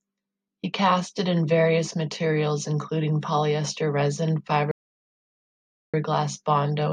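At 4.71 s, just after "materials including polyester resin", a rebuffering stall silences the speech until 5.94 s. The player starved for data. Speech resumes exactly where it stopped, adding 1.22 s.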